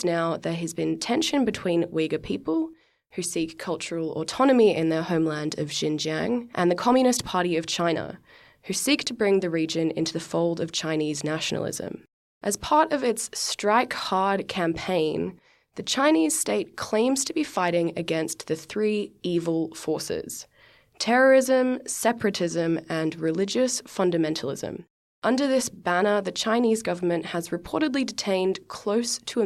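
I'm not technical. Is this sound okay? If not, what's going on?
Yes, nothing in this recording stood out as a problem when I listened to it.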